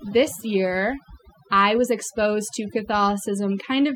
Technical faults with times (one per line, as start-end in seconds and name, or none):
0.00-3.95 overdone noise removal